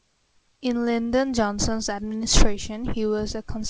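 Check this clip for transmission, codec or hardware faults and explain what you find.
Nothing wrong can be heard in this speech.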